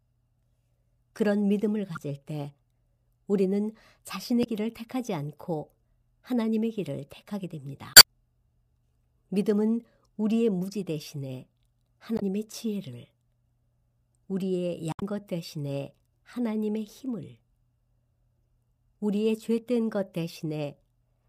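Damaged data in the compressed stream causes short glitches at 1.95–1.97, 4.41–4.47, 7.93–8.04, 12.16–12.23 and 14.92–15.02 s, as corrupt frames break decoder sync.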